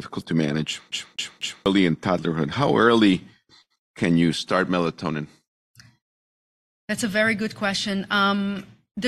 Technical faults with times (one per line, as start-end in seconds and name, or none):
0.91-1.66 CD stuck on one turn